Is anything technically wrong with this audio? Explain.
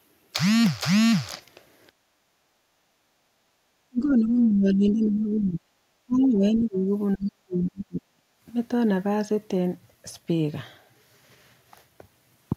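Yes, there are three echo-canceller faults in this speech clip.

Background gated by the echo canceller, 1.92 to 3.60 s: the room tone sags and briefly drops away, falling by about 15 dB for roughly a second and a half in total before returning. The canceller, hearing its loudspeaker active, clamped the microphone gain hard, and the quiet background underneath the far-end audio went with it. The effect is an audible hole in the ambience rather than a change in the talker.

Speech suppressed in double talk, 3.88 to 5.68 s, 6.06 to 6.90 s and 7.16 to 8.22 s: the talker's voice ducks and thins out in patches, by around 25 dB in the first stretch, around 20 dB in the second, and as much as roughly 40 dB in the third, where it nearly vanishes. This is likely the canceller failing to tell near-end speech from loudspeaker echo while both sides spoke, and attenuating everything.

Other side's voice leaking through, 7.13 to 7.26 s: a brief, faint scrap of a second voice surfaces, sitting well below the talker, around 25 dB down. 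It is likely residual loudspeaker pickup that the canceller did not fully subtract from the microphone. It arrives just before the heaviest suppression begins and overlaps it, so the canceller was cutting the talker hard while still letting some of the far end through.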